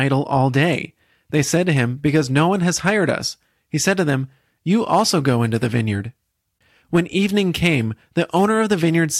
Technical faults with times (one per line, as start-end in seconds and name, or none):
1.37-2.45 hard clipping
2.88-3.10 hard clipping
4.93-5.29 hard clipping
6.95-7.75 hard clipping